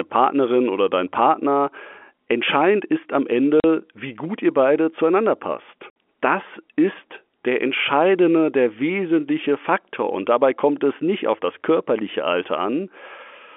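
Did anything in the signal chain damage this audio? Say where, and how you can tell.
Yes, at the network stage. The speech drops to dead silence at 3.6 s for about 40 ms and again at 5.9 s, with hard edges. These are packet losses filled with silence: the holes fit whole 20 ms packets, while the G.711 telephone band up to 3.4 kHz carries through intact.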